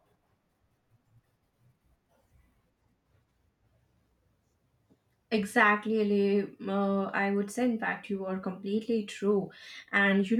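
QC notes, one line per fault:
No faults found in this clip.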